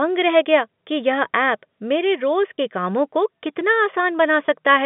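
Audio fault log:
2.56 s and 4.46 s, packet loss with pitch repetition: each time a short chunk drops out and the receiver repeats the last pitch period to cover it, so you hear a tiny held, buzzy blip instead of a gap. It fits a single 20 ms packet going missing.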